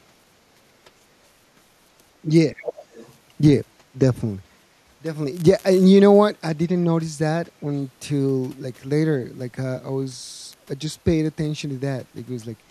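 At 2.49 to 2.56 s the speech dips by about 10 dB for roughly 70 ms. This is speech suppressed in double talk, likely caused by the echo canceller failing to tell the near talker apart from loudspeaker echo while both sides were active and attenuating everything it picked up. The dip registers as a brief sag in level rather than a full dropout.

Immediately after, from 2.56 to 3.14 s, the other side's voice leaks through for just over half a second, sitting about 15 dB below the main speech. The likely cause is incomplete echo cancellation: some of the far-end signal played on the talker's loudspeaker remained in the microphone feed and was transmitted as a quieter second voice underneath.

Speech suppressed in double talk occurs twice more. At 3.93 to 3.97 s the level again drops by about 10 dB, this time for a very short 40 ms, likely from the same suppression reacting to overlapping talk. 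At 7.62 to 7.68 s a shallower dip of about 5 dB lasts roughly 70 ms, again likely the canceller turning down the near-end signal during overlap.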